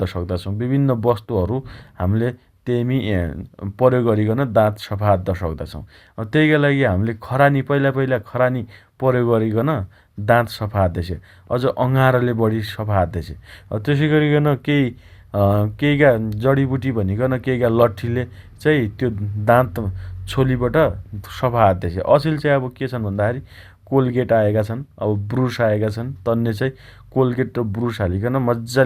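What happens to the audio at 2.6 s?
Nothing goes wrong at 2.6 s: the speech carries on intact through that moment, with no dropout, click, distortion or other fault to be heard.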